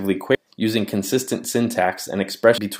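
A short glitch at 0.35 s, then a longer one from 2.58 to 2.67 s, both come from damaged data in a compressed stream. Corrupted bytes made the decoder misread those frames and lose sync before recovering at a later frame header.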